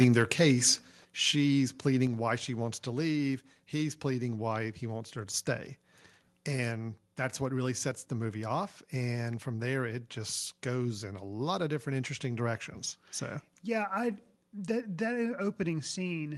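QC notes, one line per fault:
0.00–0.32 s and 0.67–0.71 s, microphone overload: the input level was likely set too high, driving peaks about 5 dB past the converter's limit. Roughly 1.5% and then about 4% of samples have their tops flattened, giving the loudest syllables a crackling, distorted edge.
0.04 s, 1.05 s and 2.07 s, microphone volume stepped down: the call software likely reacted to the overloaded input by cutting the device gain in single jumps of about 3, 6 and 4 dB. Voice and background drop suddenly each time. The last drop lands just before "why she wants to", and the total reduction is about 13 dB.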